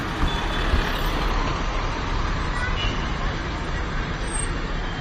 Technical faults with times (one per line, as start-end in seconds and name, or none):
1.31-5.01 adaptive stream at a lower bitrate